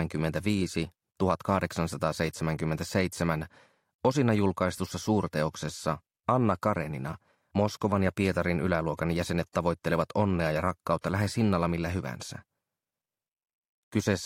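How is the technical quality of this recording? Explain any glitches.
No glitches or technical faults can be heard here.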